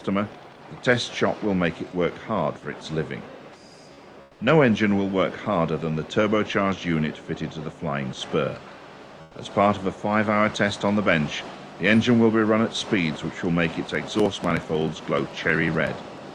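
Audio passed through a WebRTC call path, with Opus-style coding and highs ending near 12 kHz. From 4.21 to 4.39 s, about 180 ms of the real background gives way to comfort noise. The background sits about 27 dB below the loud parts, and this substitute noise is steady, featureless and about 6 dB quieter. Discontinuous transmission in Opus likely caused it. From 13.89 s to the end, periodic USB or driver dropouts appear. Small pieces of audio are skipped every 62 ms. The result is a regular ticking that sounds only while signal is present.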